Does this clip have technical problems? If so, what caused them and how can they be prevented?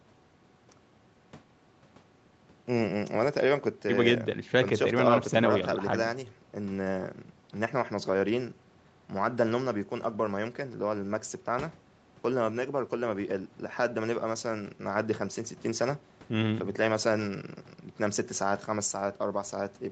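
No, this clip has no technical problems, so there is nothing to prevent.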